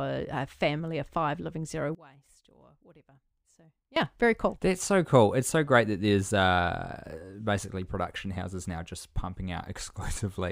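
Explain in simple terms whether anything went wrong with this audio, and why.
Something did go wrong. From about 1.95 to 3.96 seconds, right after "of five living zero" and until "very cool", the speech suddenly drops to a faint copy of itself. This is most likely one channel inverted: one side of the stereo signal is flipped upside down. When the two sides are combined into one, everything they share cancels out. The centred voice and the background nearly vanish, leaving only the small differences between them.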